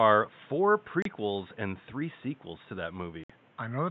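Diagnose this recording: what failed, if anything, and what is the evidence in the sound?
Unconcealed Bluetooth headset packet loss, at 1.02 to 1.06 s just before "and three sequels to", and at 3.24 to 3.30 s right after "three sequels to that". The fault is in the wireless link between headset and phone. The speech drops out for about 30 ms and then 60 ms, with abrupt edges, which fits four and then eight lost 7.5 ms mSBC frames. The receiver filled the missing frames with silence or an idle pattern instead of concealing the gaps.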